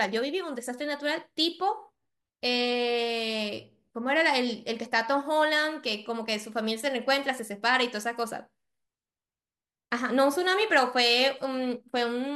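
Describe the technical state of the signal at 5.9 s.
At 5.9 s the speech comes through intact, with no audible fault at that moment.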